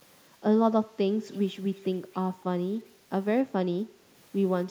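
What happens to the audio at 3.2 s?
At 3.2 s the speech carries on intact, with no dropout, click, distortion or other fault at that point.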